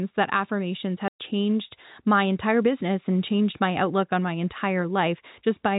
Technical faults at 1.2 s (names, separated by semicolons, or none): packet loss filled with silence